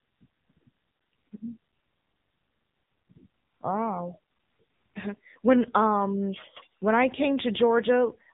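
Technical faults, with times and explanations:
Throughout: AMR narrowband mobile codec, with nothing above 3.8 kHz as a flat spectrogram ceiling; heavy buzzy, synthetic speech points to a low 6.7 kbps mode.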